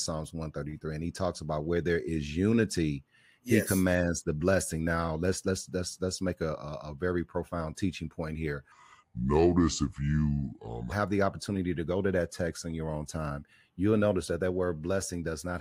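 From 8.72 to 10.92 s the speech suddenly drops in pitch and drags, sounding deep and slowed, then snaps back to normal. This is a section at the wrong speed: for about 2.2 s the audio runs at 0.735 times its recorded rate, which pulls the pitch down by roughly five semitones, with speed and pitch shifting together at the boundaries. The likely cause is that this stretch was played back or rendered against the wrong clock.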